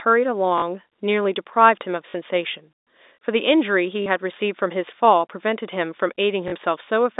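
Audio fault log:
0.58–0.62 s, 2.10–2.14 s, 4.02–4.06 s, 6.48–6.52 s: packet loss with last packet repeated. Each gap lasts 40 ms, which fits two lost 20 ms packets. The receiver filled each hole by replaying the last good packet. The replay seldom lines up with the speech's pitch period. The two repeats form a brief buzz near 50 Hz. It sounds like a short robotic stutter within the narrow telephone-band sound.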